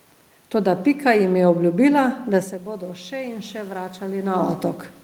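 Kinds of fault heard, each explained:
Automatic gain rising: from 3.09 s to 4.38 s the speech and the room noise behind it swell together over about 1.3 seconds, so the background lifts in step with the voice instead of holding steady. The level reaching the microphone had dropped by about 12 dB, which fits the talker moving away shortly before. The automatic gain control judged the input too quiet and slowly raised its gain by about 3 dB to compensate.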